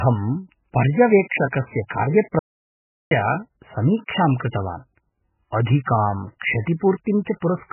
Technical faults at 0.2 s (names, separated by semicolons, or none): MP3 compression